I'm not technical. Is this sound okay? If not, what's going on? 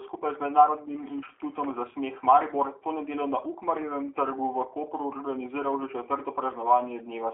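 No, not quite. From start to finish the speech goes through G.729 phone-call compression, which rebuilds each tiny slice of speech from a rough model rather than keeping the real sound. So it's muffled, with the bright top and deep bottom missing, and slightly rough and synthetic.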